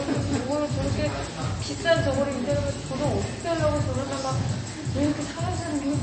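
Throughout, MP3 compression is plainly audible: nothing above 8.4 kHz, with watery, swirling residue likely from a low bitrate near 32 kbps. A plain low-pass filter would dull the sound without that shimmer.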